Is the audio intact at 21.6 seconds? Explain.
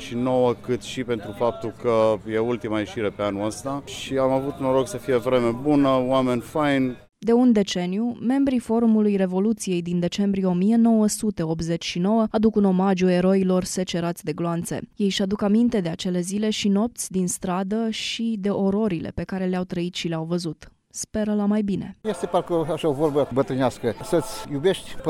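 Yes, at 21.6 seconds the audio is intact, with nothing there to indicate a dropout, glitch or other technical fault.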